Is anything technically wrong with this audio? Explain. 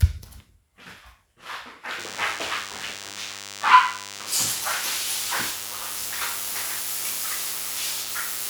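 Yes, there is one fault. DECT cordless phone buzz runs from 1.99 s to the end at 8.49 s. A nearby DECT handset or base transmits a radio burst every 10 ms, and the audio circuitry rectifies it, producing a steady, thin 100 Hz buzz rich in harmonics, sitting roughly 10 dB below the wanted sound.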